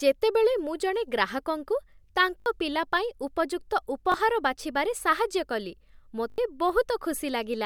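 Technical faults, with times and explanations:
2.40–2.46 s, 4.12–4.14 s and 6.30–6.38 s, repeated buffer: Each is a quick buzzy stutter, just before "ପିଲା ପାଇଁ ଉପଯୁକ୍ତ", then before "ବାଛିବାରେ ସାହାଯ୍ୟ କଲି", then after it. Late audio made the device replay its last slice of about 20 ms. The repeats number three, one and four, with hard joins.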